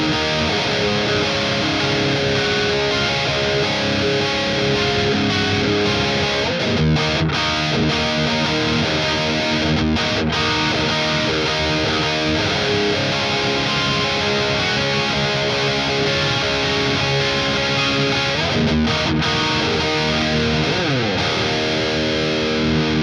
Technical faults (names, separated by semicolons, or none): none